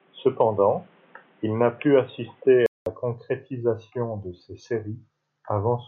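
From the start to 2.86 s the speech sounds dull and boxy, with nothing above 3.8 kHz, a faint added noise floor and a somewhat different level. A brief silence of 200 ms then precedes fuller sound, likely an input switched to a poorer device.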